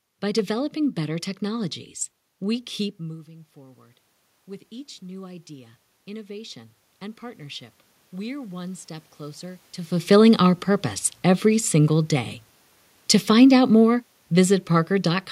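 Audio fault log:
2.99 to 4.05 s and 4.69 to 7.5 s, automatic gain rising: the input falls by about 19 dB when the talker moves away around 3 s, and the gain control lifts its level to compensate, by about 3 dB in the first stretch and about 6 dB in the second. Because it is raising the whole signal over a second or more, the room noise swells up right along with the voice, so you hear the background creep louder too.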